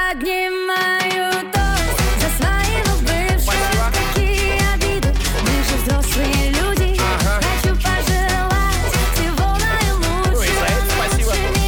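From 0.11 s to 11.44 s the audio carries word clock ticks: short, sharp clicks of uneven strength recurring roughly every 0.4 s, about thirty in all. The receiving device is running on its own clock rather than locking to the sender's. The two drift apart by something like 50 ppm, and at each slip a few samples are misread while a single sample is dropped or repeated, leaving a brief discontinuity in the waveform.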